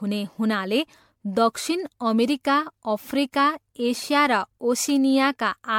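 Speech clip with generation loss throughout: a swirly, smeared, hollow quality and blurred consonant attacks, worse than one encode would give, with nothing above about 19.9 kHz. It fits roughly seven MP3 passes at 96 kbit/s, likely from repeated re-encoding compounding quantisation noise and spectral holes.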